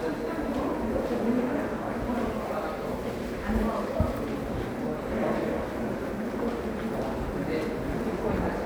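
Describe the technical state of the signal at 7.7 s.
At 7.7 s the everyday sound in the clip plays through intact, with no dropout, clipping, distortion or other fault at that moment.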